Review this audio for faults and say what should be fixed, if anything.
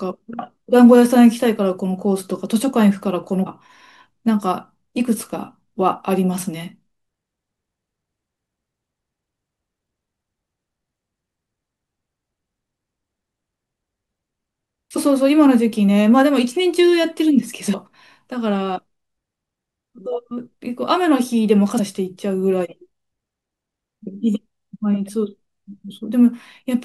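Damaged data in a compressed stream causes five brief glitches in the speech at 3.46, 14.95, 17.73, 21.78 and 25.90 s. At each point the decoder hits corrupted frames, misreads them and loses sync until it finds a valid header. To prevent this, re-fetch or re-encode from an intact source and verify file checksums after transfer.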